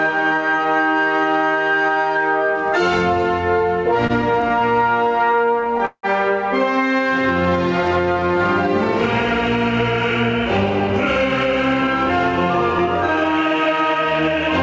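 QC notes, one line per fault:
Throughout, gain pumping: the level swings by around 10 dB. Loud and quiet passages sit unnaturally close together. The likely cause is input gain set far too high, with a fast limiter or compressor clamping down on each peak.
4.07–6.06 s, repeated stalls (stutter): the receiver's jitter buffer ran dry again and again across these two seconds. Each gap was bridged by stretching the last sound, with the longest hold at 178 ms. About 424 ms, or 21% of the span, is filler, but nothing is lost. The sound drags and stutters rather than dropping out.
7.04–8.39 s, jitter buffer slow-down: the buffer was rebuilding its reserve by repeating single pitch periods and fragments of pauses many times over. This added 168 ms and ran playback at 88% speed with the pitch unchanged. Sounds come out drawn-out.
11.32–13.96 s, jitter buffer speed-up: the buffer held more audio than its target, so the receiver trimmed short pitch-period slices repeatedly to cut delay. 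About 0.3 s was removed, running playback at 110% speed at the same pitch. The passage sounds hurried, over a band-limited G.722 path with nothing above 8 kHz.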